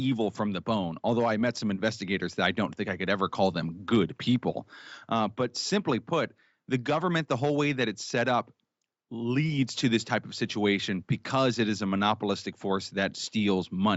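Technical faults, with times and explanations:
No technical faults can be heard anywhere in the clip. Nothing sits above 8 kHz, which fits the bandwidth of the call codec and the microphone processing working as intended.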